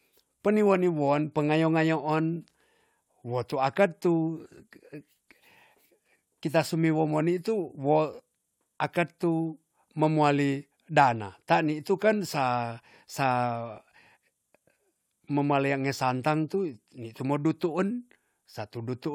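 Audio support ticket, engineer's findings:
No faults found in this audio; nothing to report for the ticket.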